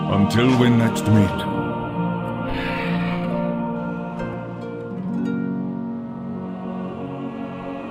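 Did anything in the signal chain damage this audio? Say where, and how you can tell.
Yes. Between 1.39 and 3.76 s one channel arrives a few samples late, a tiny offset of about 0.07 ms, and the two channels are then summed to mono. That points to a misaligned buffer or channel path at the driver stage. The result is channel delay (comb filtering): shared content cancels at regularly spaced frequencies, with the first notch around 7 kHz, so the sound turns hollow and phasey for that stretch.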